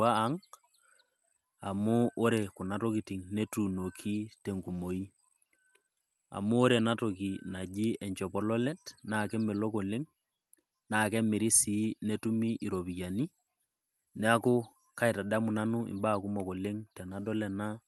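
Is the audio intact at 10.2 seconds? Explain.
Yes, the speech at 10.2 seconds is intact, carrying only the ordinary sound of the Opus call path that runs through the whole clip.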